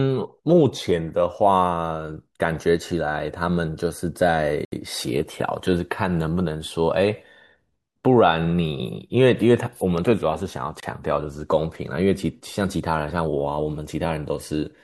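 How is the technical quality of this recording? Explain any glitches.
The recording has three glitches in the speech: two brief dropouts and one double pop.

Bluetooth stall, at 4.65 to 4.72 s and again at 10.80 to 10.83 s. These were likely caused by radio interference delaying wireless packets, so the receiving buffer emptied and playback halted until the resent data arrived. The first gap is 71 ms of silence, the second 28 ms. Each time the speech cuts out abruptly and then resumes.

Loud pop, between 9.98 and 10.13 s. This was likely a sudden voltage step or pulse, from a switch, plug, static discharge or driver glitch, that was added to the signal and shaped by the downstream circuitry. It is heard as two sharp pops in quick succession, peaking a few decibels above the speech, while the speech continues underneath.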